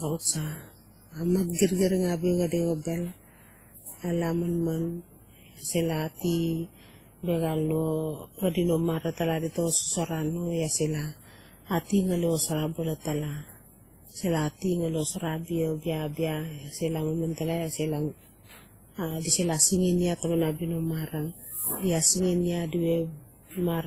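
The speech in this clip has most likely been encoded with one lossy codec and then re-encoded with another, an instance of transcoding between lossy codecs. The character suggests a low-rate WMA-style stage followed by Opus at a similarly modest rate. The second encoder spends its limited bits reproducing the first one's smearing and swirl, then layers its own artefacts on top, so both kinds are heard at once throughout. The lowest band limit survives, leaving nothing above about 15.8 kHz.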